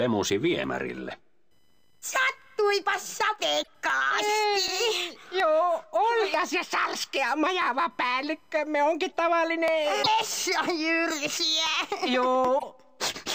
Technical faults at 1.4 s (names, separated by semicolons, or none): computer activity noise